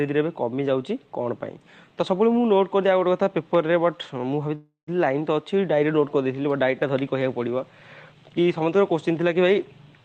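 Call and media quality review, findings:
Call audio freeze, 4.55–4.89 s: sound stretches into a fading buzz or hiss, then 150 ms silence, resuming intact 320 ms late. Likely jitter buffer underrun from delayed packets.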